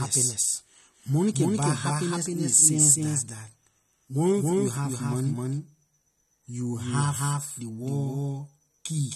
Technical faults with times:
0.00-9.15 doubled audio track
0.00-9.15 AAC compression

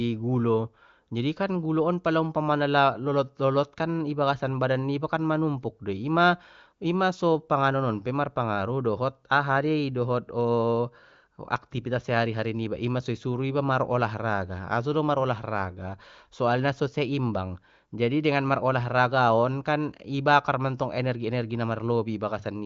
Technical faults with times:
none

